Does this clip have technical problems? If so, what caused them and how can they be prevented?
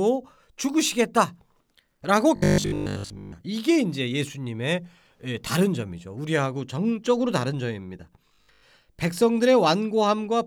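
Yes. Robotic sound from repeated short buffers appears from 2.36 to 3.34 s and again from 8.29 to 8.63 s: the speech turns into a rigid, metallic buzz at 50 Hz that still loosely tracks the words. The likely cause is audio arriving too slowly, so the player loops the last chunk of roughly 20 ms and skips most of the real signal. Giving the audio path a larger buffer and steadier delivery would prevent it.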